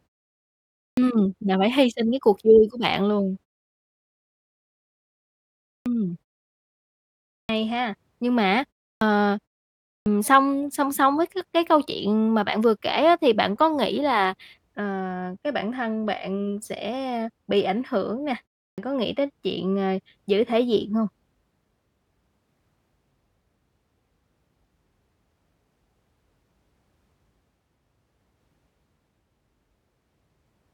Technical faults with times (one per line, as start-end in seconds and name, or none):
0.90-0.97 clipped start after a pause
5.78-5.86 clipped start after a pause
7.42-7.49 clipped start after a pause
8.94-9.01 clipped start after a pause
9.99-10.06 clipped start after a pause
18.70-18.78 clipped start after a pause